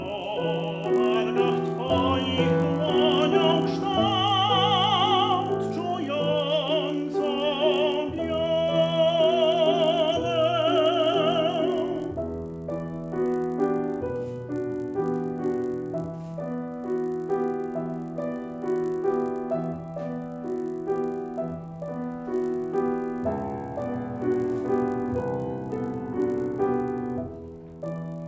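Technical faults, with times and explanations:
Throughout: resampler restarted on every block. A steady 50 Hz buzz rides under the sound and is present only while signal is present, vanishing in silences. Every 20 ms the rate converter started fresh on a new block, treating the samples beyond each edge as silence or as the block's far end rather than the true neighbours. That leaves a small error at each seam, and at this block length the ticks fuse into a buzz. The sound fits a conversion from 24 kHz down to 16 kHz.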